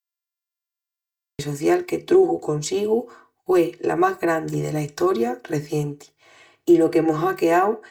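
One channel runs roughly 3 ms behind the other, and the two are summed to mono throughout, producing channel delay (comb filtering). The shared speech cancels at evenly spaced frequencies from around 200 Hz upward, leaving the voice hollow and phasey with fixed spectral notches.

The recording began late, causing a cut-off start. Digital silence runs until 1.39 s, then the speech enters abruptly in mid-sound, with no natural attack or fade, just before "social que truxu".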